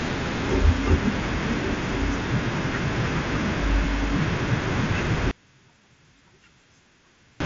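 From 5.31 s to 7.40 s the speech drops by about 32 dB and nearly vanishes. That's most likely one channel inverted: one side's polarity is flipped, so the material common to both channels cancels when they're summed to mono. Throughout the clip, nothing reaches above about 7.6 kHz, which fits the mSBC Bluetooth link.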